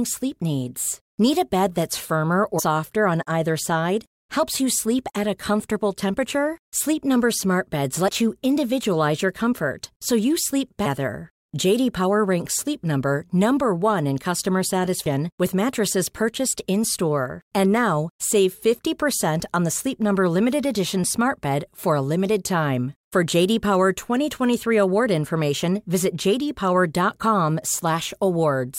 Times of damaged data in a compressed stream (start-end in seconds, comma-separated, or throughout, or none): 2.58, 8.08